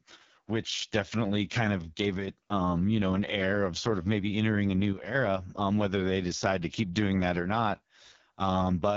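The speech runs through the AMR wideband (HD Voice) codec at 6.6 kbit/s, its lowest rate, so the vocal tract model starves for bits. Throughout, the voice sounds rough and raspy, with nothing above about 7.3 kHz.

Twice, one channel drops out, likely a stereo channel briefly lost before the mono sum: from 2.17 to 2.28 s after "definitely kind of gave", and from 4.93 to 5.15 s after "of maybe entering a". Each time the level abruptly dips by about 6 dB, then recovers.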